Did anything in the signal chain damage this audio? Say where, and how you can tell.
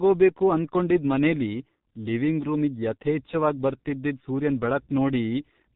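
Yes: G.723.1 codec damage runs through the whole speech clip, so it comes from the codec stage. The bandwidth stops at 4 kHz, leaving the speech muffled, and the voice takes on a hoarse, buzzy texture as the coder's coarse model of the vocal tract updates only in 30 ms steps. Consonants smear together. The damage is heavy, which fits a low bitrate of around 6 kbit/s squeezing the signal through a narrowband vocoder.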